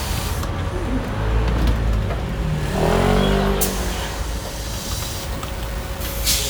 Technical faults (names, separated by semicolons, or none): low bit depth without dither